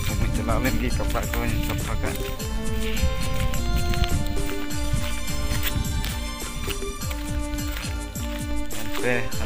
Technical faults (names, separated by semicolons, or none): DC step